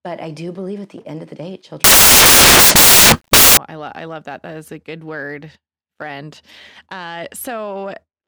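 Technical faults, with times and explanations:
1.84–3.57 s: samples built from the wrong bytes. Right after "end of the day", the speech gives way to loud, broadband hiss for about 1.7 seconds. The decoder assembles each sample from misaligned or misordered bytes, so the rapidly fluctuating low-order bits land in the most significant positions. The resulting values jump almost randomly from sample to sample, which is why the section sounds like harsh white noise at high level rather than distorted speech.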